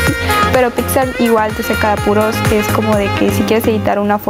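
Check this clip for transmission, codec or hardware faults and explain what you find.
One fault runs throughout: gain pumping. The level swings by around 10 dB, so loud and soft parts sit squashed close together. The likely cause is input gain set far too high, with a fast limiter or compressor clamping down on every peak.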